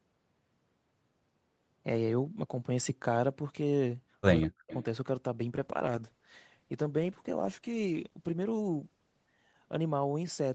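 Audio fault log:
4.45–4.72 s, speech suppressed in double talk: level dips by about 40 dB, likely the echo canceller ducking the near talker during overlapping speech.
4.71–4.83 s, echo leak: a faint copy of the voice returns 192 ms late, about 20 dB below the speech, likely residual loudspeaker echo the canceller failed to remove.
5.59–10.55 s, call bitrate drop: audio turns rough and watery, consistent with Opus falling from about 32 to 10 kbps, staying coarsest for roughly 3.7 s.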